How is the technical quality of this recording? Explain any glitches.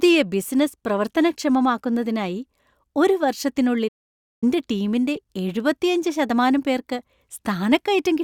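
Two glitches interrupt this speech recording.

From 3.88 to 4.44 s there is a playback stall. The sound cuts out for about 0.54 s, likely because the player ran short of data. It shows as a flat waveform gap with a blank spectrogram column.

At 5.16 s, just before "എഴുപത്തിയഞ്ച് ശതമാനം പേർക്ക്", a corrupt frame is decoded. Damaged bits misplace energy across frequencies, producing a brief glitch that shows as a thin vertical smear on the spectrogram.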